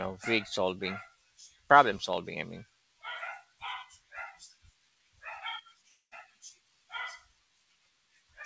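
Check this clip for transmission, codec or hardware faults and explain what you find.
One fault stands out in the speech, a long network dropout. It runs from 5.88 s to 6.14 s. The likely cause is a stretch where no audio data reached the receiver. To cover the gap, the receiver stretches the last sound into a fading buzz or hiss for about 233 ms. About 140 ms of near silence is heard within the gap. Around 240 ms of the original is lost, so the speech resumes with a piece missing. The call codec path shows as its usual coding noise and a band limit, with nothing above 8 kHz.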